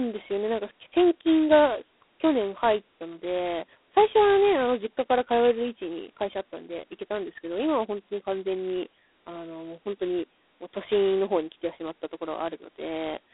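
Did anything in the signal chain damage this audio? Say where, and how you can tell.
Yes, at the codec: G.726 ADPCM at 16 kbit/s, just 2 bits a sample of prediction error, so a rasping hiss tracks the speech throughout, with nothing above 3.9 kHz.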